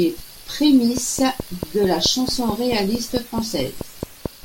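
A train of clicks runs from 0.97 s to 4.27 s: about fifteen near-identical pulses at a steady 4.6 per second, each peaking roughly 15 dB above the speech. They tick over the talking and in the pauses too, so they sit on top of the recording rather than coming from the speech itself. The regular spacing points to a repeating disturbance, likely interference from nearby equipment or a faulty connection or power supply.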